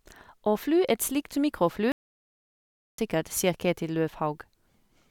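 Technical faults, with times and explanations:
1.92 to 2.98 s, playback stall: the speech cuts off abruptly in mid-flow and the output stays silent for about 1.06 s before the sound resumes, most likely because the player ran short of buffered data or its playback thread was held up. On the waveform this shows as a flat, empty stretch between two hard edges, and on the spectrogram as a blank vertical band with no energy at any frequency across that span.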